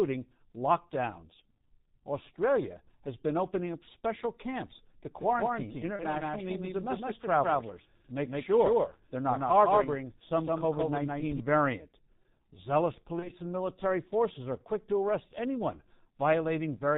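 Speech throughout sounds muffled and hoarse, with nothing above 4 kHz and smeared consonants. That is heavy G.723.1 codec damage: its 30 ms frames and slow voice model, at a rate consistent with about 6.3 kbit/s, strip detail. From 5.18 to 11.40 s, just after "up special camps to", the speech is doubled. A dry, full-band copy at about the same level trails by roughly 150 ms and starts and stops abruptly. This is likely a doubled audio track, with the audio captured a second time by a slower path. At 5.96 to 6.05 s, and again at 13.19 to 13.31 s just before "and military forces are", the speech is briefly stretched out and fades, and stays weak for a moment afterwards. That is VoIP packet loss concealed by the speech codec, each gap fitting a single lost 30 ms frame that the decoder filled by extrapolating its last pitch and filter at falling gain.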